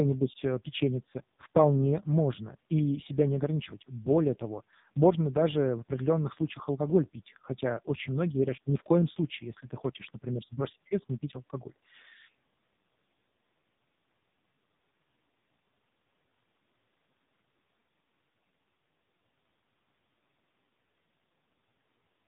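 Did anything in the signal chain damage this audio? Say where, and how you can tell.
Yes, at the codec stage: AMR narrowband mobile codec throughout. Nothing passes above 3.8 kHz, and heavily buzzy, synthetic speech fits a bitrate near 5 kbps.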